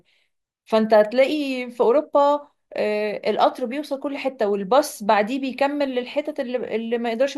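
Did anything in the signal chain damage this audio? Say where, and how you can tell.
No, nothing along the chain has left a mark on this recording that I can hear, so there's no stage to point to here.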